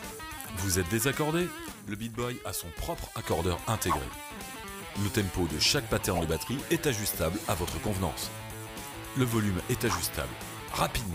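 At 1.72 s the level drops by about 6 dB in one step, background and all, and stays there until 3.24 s, when it snaps back up. That's a sudden gain jump, likely a gain change applied without any ramp between samples.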